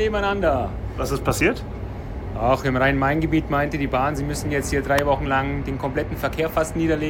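At about 4.99 s there's a single sharp snap sitting on top of the audio, over almost instantly and peaking at about -5 dBFS. It's an electrical switching spike, likely from a nearby switch, motor or static discharge arcing briefly and getting picked up on the audio line.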